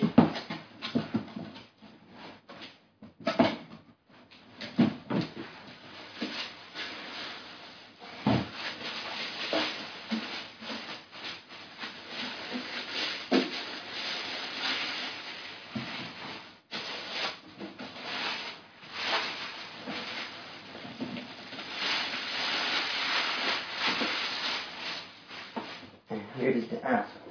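Nothing stood out on listening; no technical faults were heard at any point in the audio.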